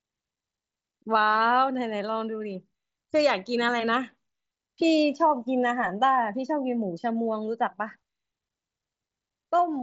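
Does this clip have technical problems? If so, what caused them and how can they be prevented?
No, there's nothing here to fix; the speech comes through a Bluetooth mSBC headset link, which is why nothing sits above about 7.7 kHz.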